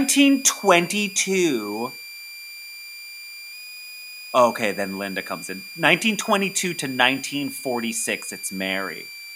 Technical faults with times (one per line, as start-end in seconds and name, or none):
0.00-9.36 switching supply whistle